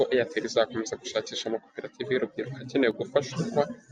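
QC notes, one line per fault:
2.91–3.14 s, one channel drops out: just after "gushakisha amakoperative y’urubyiruko akenewe" the speech level falls abruptly by about 6 dB for roughly a quarter second, then recovers. This is likely one stereo channel going silent, halving the material common to both in the mono sum.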